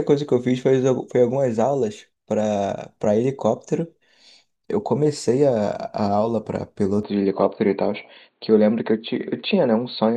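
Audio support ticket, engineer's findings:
Speech turns dull and boxy from 7.03 s to end; nothing above 4.5 kHz after the change. No gap at the switch, level steady, faint new background noise well below the signal. Likely cause: input switched to a poorer device, e.g. a headset call profile or narrower-band mic, cutting off the upper range.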